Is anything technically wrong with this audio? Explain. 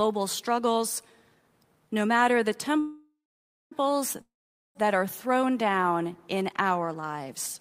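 Yes, there are two call audio freezes. Packets were likely delayed in transit, draining the jitter buffer, first at 2.79–3.73 s after "no matter the", then at 4.21–4.77 s before "that are". Each time the last sound stretches into a fading buzz or hiss, then silence. Speech resumes where it stopped, with nothing lost but 0.92 s and 0.54 s of delay added.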